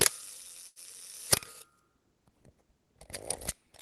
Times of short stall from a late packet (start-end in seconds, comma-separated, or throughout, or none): 0.67-0.79